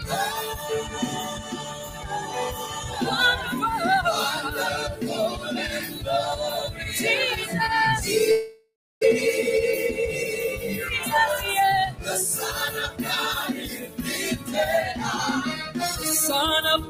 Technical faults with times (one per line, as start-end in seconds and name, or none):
0.00-16.89 noise suppressor applied to music or sounds
0.37-2.98 sound cut by the noise suppressor
5.86-6.01 sound cut by the noise suppressor
8.31-9.05 long network dropout
11.60-11.99 jitter buffer speed-up
13.66-14.00 sound cut by the noise suppressor